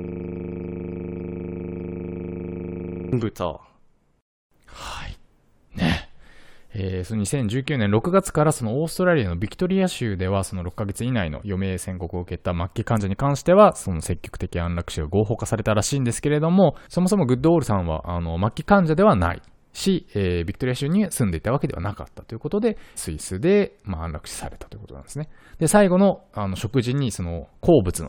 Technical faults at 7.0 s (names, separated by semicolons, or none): none